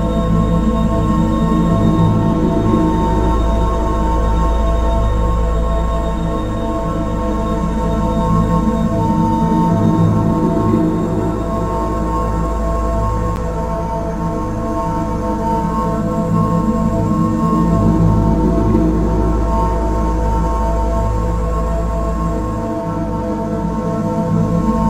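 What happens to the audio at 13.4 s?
At 13.36 s there is a brief tick or dip, a block of digital silence about 10 ms long, where the output dropped to zeros, either because a buffer went unfilled in time or because a calculation produced invalid values.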